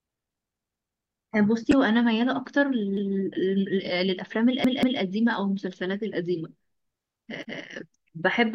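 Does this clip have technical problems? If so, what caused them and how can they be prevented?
Yes. The speech stutters four times, the same fragment of about 186 ms sounding again with a hard join at each restart: from 0.56 to 1.30 s (four extra plays), 2.97 to 3.16 s (one), 4.64 to 5.02 s (two) and 7.43 to 7.62 s (one). This is a repeated buffer. New audio arrived late, so the device replayed its last block, which fits an 8192-sample buffer, and essentially nothing was skipped. Feeding the output reliably, with a larger queue or a higher-priority audio thread, prevents it.

At 1.69 to 1.73 s a brief 40 ms glitch cuts in. This points to damaged data in a compressed stream: the decoder hit corrupted frames, lost sync and resynchronised on the next frame header. Checksummed transport with retransmission, or verifying files before playback, prevents it.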